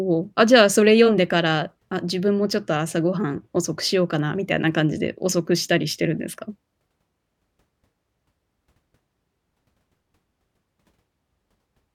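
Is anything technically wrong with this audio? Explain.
Yes. At 5.91 s a single sharp click marks dropped samples: a handful likely went missing, so the waveform jumps abruptly, without the silent gap a longer dropout leaves.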